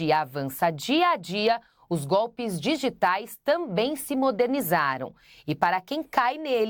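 No technical faults are audible anywhere in the speech recording.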